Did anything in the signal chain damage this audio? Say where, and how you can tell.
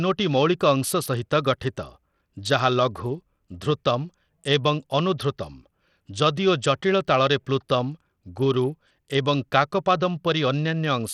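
Yes, across the whole speech clip the top end sounds thin and unstable, with treble flickering in and out and a gritty, grainy noise riding on the voice, plus aliasing. That pattern places the damage at the codec stage, likely Bluetooth SBC compression at a small bit pool. The upper sub-bands get too few bits to stay present, and the coarse quantising of the rest leaves the grit, which fits a low bitrate of about 80 kbps.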